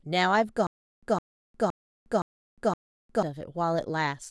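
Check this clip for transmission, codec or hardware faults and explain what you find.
One fault here, a stutter with silent gaps from 0.67 to 3.23 s. A 160 ms burst of speech repeats five times, each followed by 357 ms of digital silence, likely a stalled stream replaying its last fragment.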